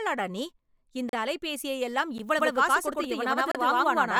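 At 1.09 s, right after "நீ இந்த", the speech drops into a block of digital silence lasting about 38 ms, through 1.13 s. The sound cuts out and back with no fade, and the gap is heard as a brief hole. A second dropout at 2.18 s, after "நீ இந்த அலைபேசியையெல்லாம்", is only about 11 ms long, which fits a 512-sample buffer the program failed to fill in time. It comes across as a single tick.

From 2.39 s to the end there is a doubled audio track. A full-band copy of the speech runs about a tenth of a second behind the original at roughly equal loudness. It has no decay or room colouring, so it sounds like a second overlapping take rather than an echo. It starts abruptly, most likely because the signal is being captured again by a slower path.

While the doubling is present, another block of digital silence falls between 3.52 and 3.55 s, about 32 ms long.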